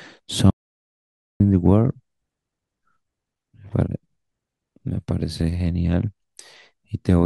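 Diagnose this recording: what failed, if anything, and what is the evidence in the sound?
The input stage dropped out: an audio dropout to silence from 0.50 s to 1.40 s cuts the speech off mid-flow and replaces about 0.9 s with silence, no room tone. The likely cause is a lost input device or link while the recorder kept writing samples.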